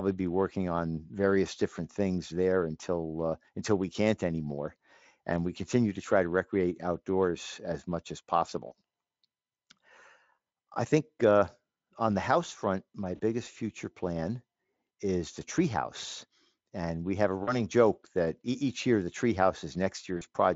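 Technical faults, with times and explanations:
8.67–8.72 s, 13.15–13.21 s, 17.43–17.59 s and 20.17–20.24 s, VoIP packet loss concealed by the speech codec: each time about 40 ms of audio goes missing, which fits two 20 ms frames, after "outdoors as much as", between "the house front my" and "future plan is the", and before "joke that each year". The decoder repeats its last pitch and spectral shape at falling gain, so the sound smears into a brief buzzy tone or coloured noise that fades. Because each frame builds on the previous one, the audio stays weak or distorted just after the gap. This is heard over the light Speex coding of the rest of the clip.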